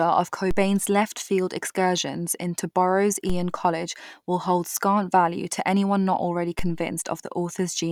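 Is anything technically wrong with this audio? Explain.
Yes. The speech carries three DC steps, at 0.51 s, 3.30 s and 6.59 s. At each one the waveform's zero line suddenly jumps by about -18 dBFS. That offset does not hold. It drains away as if through a 2 Hz high-pass filter, so the baseline slides back to centre over a fraction of a second. Each jump is heard as a short low thump or click. The speech itself runs on unchanged underneath.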